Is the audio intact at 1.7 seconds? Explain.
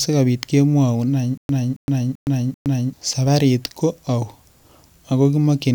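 No. At 1.7 seconds the speech is caught in a stutter with silent gaps, running from 1.38 to 2.93 s. A fragment of about 272 ms plays, then about 117 ms of dead silence, repeating four times every 389 ms. The likely cause is a stalled stream replaying its last buffer on each retry, so the original audio from that span is lost. On a waveform it shows as identical blocks separated by flat lines. A spectrogram shows copied patches with empty vertical bands between them.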